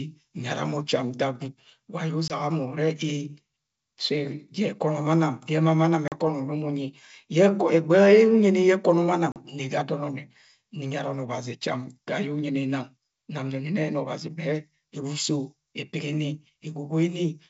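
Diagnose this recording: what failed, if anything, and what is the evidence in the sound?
The failure is at the network stage: packet loss on an ADPCM call. Three hard-edged silent holes appear in the speech. The first comes at 2.28 to 2.37 s, right after "wa aye", and about 20 ms of audio is missing, which fits one lost packet. The next two fall at 6.08 to 6.15 s and 9.32 to 9.38 s, each about 40 ms, which suggests two lost packets each. The decoder's predictor and step size lose track of the sender's during the gap. So the speech resumes slightly distorted and settles within tens of milliseconds. The G.722 wideband coding stays clear up to 7 kHz.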